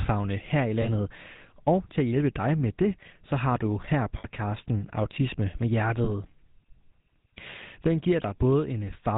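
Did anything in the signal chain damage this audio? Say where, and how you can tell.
Yes. At the codec stage, the speech carries a plainly audible buzzy, gravelly roughness throughout and nothing above 4 kHz, which fits GSM full-rate coding at 13 kbps. That coder models the vocal tract and drives it with regular pulses, keeping every third excitation sample.

Lost GSM frames on the transmission link cause brief metallic rings at 0.82–0.88 s after "her i", 4.18–4.26 s after "så har du her", and 6.04–6.10 s. The decoder held the last good frame, covering roughly 20, 60 and 20 ms.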